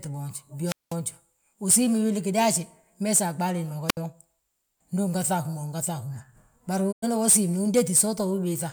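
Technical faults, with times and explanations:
0.64–0.96 s and 3.88–3.97 s, wireless microphone squelch dropout: the analogue FM radio link fades, hiss and static rise briefly, then the receiver's squelch cuts the output to near silence for about 197 ms in the first event and 69 ms in the second before the voice returns. The rise of static before each hole is the falling signal-to-noise ratio of the weakening carrier, just before the squelch threshold gates it.
6.91–7.04 s, digital broadcast dropout: the receiver stops getting valid frames and mutes, fading the voice down over about 20 ms and leaving a clean gap of about 96 ms, which fits three lost 32 ms frames. There is no hiss in the gap, unlike the radio-mic holes, because a digital decoder outputs silence rather than noise when data fails. The audio sent during the gap is gone, so the speech resumes partway through.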